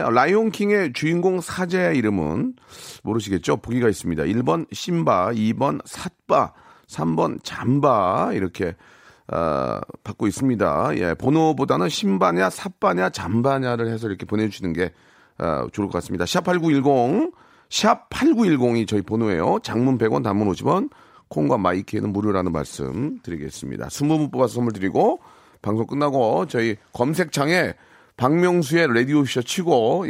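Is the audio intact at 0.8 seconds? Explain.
Yes, the speech at 0.8 seconds plays through intact, with no dropout, click, distortion or other fault at that moment.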